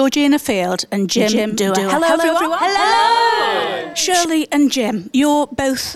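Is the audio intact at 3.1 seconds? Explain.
No. At 3.1 seconds the sound is doubled. A doubled audio track runs from 1.17 to 4.25 s. A second full-band copy trails the original by about 150 ms and is roughly as loud. The likely cause is the same audio reaching the mix twice, once through a slower path. Every onset is heard twice, like a flat slapback with no decay or room colour. The copy starts and stops abruptly at the span's edges.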